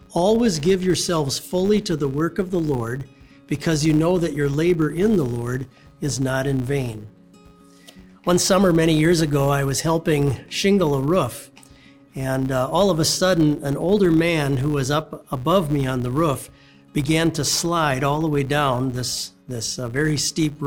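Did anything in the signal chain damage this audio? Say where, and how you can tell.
Yes: a steady 100 Hz buzz tracking the sound's level runs throughout, a filter restarted on every block, where processing resets its state each 10 ms block, leaving a tick.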